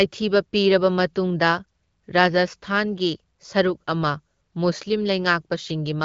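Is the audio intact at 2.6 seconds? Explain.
Yes, the audio is intact at 2.6 seconds, with no fault at that moment.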